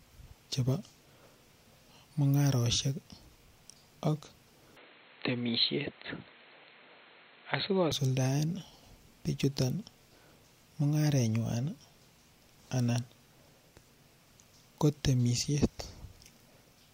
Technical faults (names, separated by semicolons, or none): input switched to a poorer device